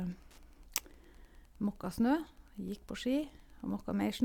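Right from the start and all the way through, there's Wi-Fi interference under the speech: a nearby radio's beacon, firing every 102.4 ms, is being picked up and rectified by the audio circuit, so you get a steady faint ticking about ten times a second, sitting well below the speech.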